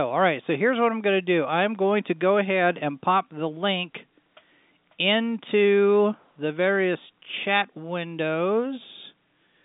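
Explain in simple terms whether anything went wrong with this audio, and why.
Nothing went wrong; it's ordinary telephone-line speech.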